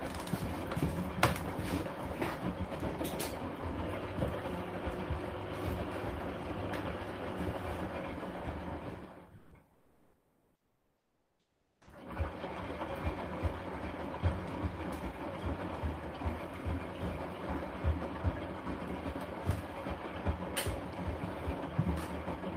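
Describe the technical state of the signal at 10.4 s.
At 10.4 s the signal sits inside a stretch of comfort noise in place of the background, from 9.75 to 11.87 s. The real background gives way to a steady, featureless hiss about 7 dB quieter, likely from discontinuous transmission with the receiver synthesising noise.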